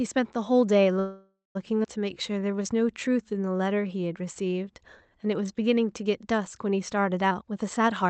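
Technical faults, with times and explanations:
0.99–1.57 s, call audio freeze: a 0.56 s gap, the last sound held as a fading buzz or hiss then about 150 ms silence, likely from delayed packets emptying the jitter buffer; nothing lost.
1.83 s, skip ahead: roughly 0.3 s of speech is dropped and playback jumps forward almost seamlessly, as audio was dropped while later packets waited.
2.14–5.10 s, jitter buffer slow-down: repeated pitch periods stretch speech to 89% speed, adding 0.34 s at unchanged pitch, drawn out, building a reserve in the buffer.
7.28–8.09 s, jitter buffer speed-up: short pitch-period cuts remove roughly 0.3 s, running speech at 134% speed with the same pitch, sounding hurried as the receiver trims excess delay.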